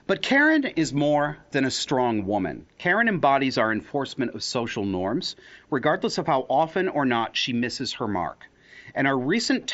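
No technical faults are audible.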